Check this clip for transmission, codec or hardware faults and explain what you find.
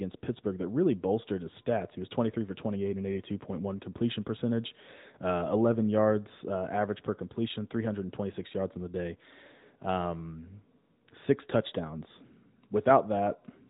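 One codec fault runs through the whole speech clip. AMR narrowband mobile codec, throughout: all content stops at about 3.8 kHz, and the voice has a plainly audible buzzy, synthetic edge. It is rebuilt from a vocal-tract model driven by sparse pulses at one of its higher modes, around 10 kbps. That synthetic buzz, not just the missing top end, sets it apart from a plain low-pass filter.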